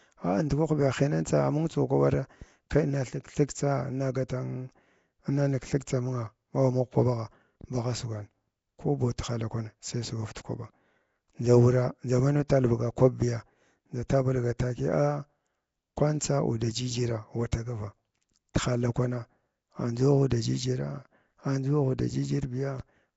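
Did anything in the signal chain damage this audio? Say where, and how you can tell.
Yes, at the codec stage: rough, hissy, underwater-sounding speech throughout and nothing above 7.7 kHz point to Nellymoser compression, likely at a low bitrate.

Pre-echo precedes attacks at 4.29, 10.35, 17.52, 18.54 and 20.3 s: 10 to 13 ms of hiss, block-wide quantisation noise leaking ahead of each onset.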